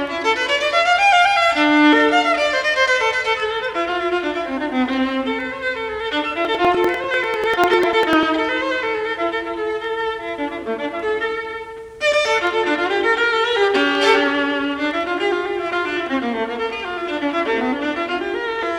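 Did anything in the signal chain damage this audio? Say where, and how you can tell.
Yes, at the driver or buffer stage. From 6.45 to 8.23 s there's a run of periodic USB or driver dropouts: regular ticks every 0.099 s, about twenty, each skipping roughly a millisecond of audio. Something's stalling the bus or driver on a fixed cycle, and the gaps just get spliced shut.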